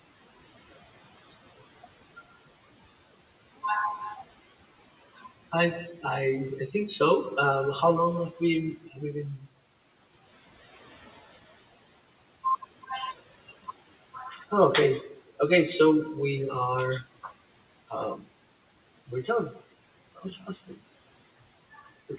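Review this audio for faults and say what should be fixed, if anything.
Noise suppressor artifacts run through the whole clip. The steady room noise is pushed down by about 16 dB in the gaps and swells back under the speech. On a spectrogram the noise floor flickers in patches between syllables.

Speech cut by the noise suppressor occurs at 8.77–8.99 s, 9.37–9.47 s, 14.14–14.52 s, 15.02–15.2 s and 20.15–20.78 s. The suppressor mistook quiet speech for noise and dipped it by about 8 to 14 dB, so those parts sound swallowed. These show as sudden notches in the waveform envelope.

To prevent both, reduce the suppressor's attenuation depth and smooth its per-frame gain so faint speech stays above its threshold.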